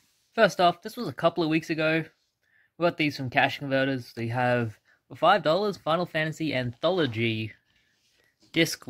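No technical faults can be heard anywhere in this audio.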